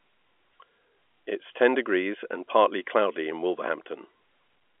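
No technical faults are audible.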